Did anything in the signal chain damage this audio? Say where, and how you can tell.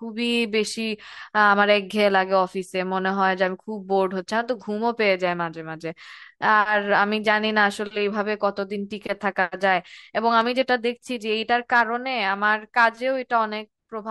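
Yes: a loud pop, a double click at 10.41 to 10.48 s, peaks a few dB above the speech, which continues underneath, likely a voltage transient from a switch or connector in the analogue wiring.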